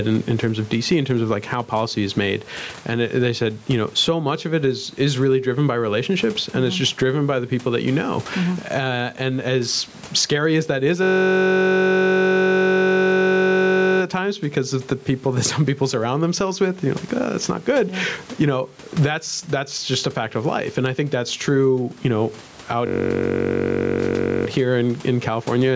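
Gain pumping runs through the whole recording. The gain swings by about 15 dB, squashing loud and soft passages together. The likely cause is microphone gain set far too high, with a fast limiter repeatedly pulling it down.

A system hang loop occurs from 11.03 to 14.02 s and again from 22.87 to 24.47 s. While the computer or driver was frozen, the hardware kept replaying one 21.33 ms slice, which fits a 1024-sample buffer, producing a steady 46.9 Hz buzz.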